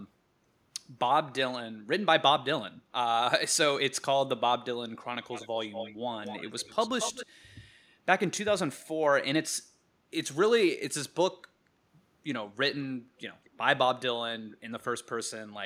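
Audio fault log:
5.31–7.26 s, echo leak: three stretches (5.31–5.49, 5.72–5.95 and 6.24–7.26 s) carry a delayed copy of the speech trailing it by about 233 ms, roughly 10 to 15 dB down. The likely cause is a loudspeaker-side echo canceller letting part of the pickup return. The copy sits at a fixed lag, unlike room reverberation, which decays smoothly.
13.44–13.5 s, echo leak: a brief, very faint scrap at a similar 229 ms lag.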